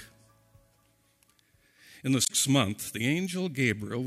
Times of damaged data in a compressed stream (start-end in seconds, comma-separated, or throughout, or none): 2.23-2.30